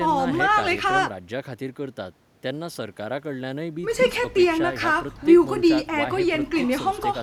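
A speech recording with nothing technically wrong with it.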